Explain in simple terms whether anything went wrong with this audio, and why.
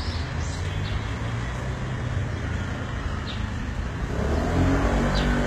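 Something did go wrong, and it lasts the whole clip. The top end is there, but it is not the real treble. It has a gritty, metallic edge, and the high parts don't blend smoothly with the lower ones. Nothing at all comes through above about 14.9 kHz. This is likely HE-AAC compression. That kind of codec keeps only the lower sound and fakes the treble by copying lower bands upward, so the top end is rebuilt rather than recorded.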